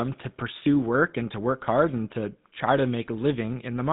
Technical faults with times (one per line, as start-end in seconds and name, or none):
0.00-3.93 GSM full-rate codec